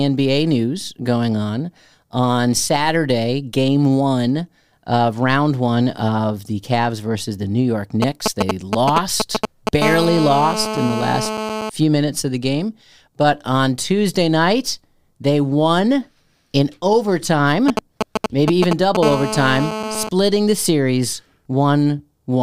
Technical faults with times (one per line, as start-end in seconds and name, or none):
8.02-9.83 GSM signalling bursts
9.83-11.70 GSM phone buzz
17.68-18.97 GSM signalling bursts
19.03-20.09 GSM phone buzz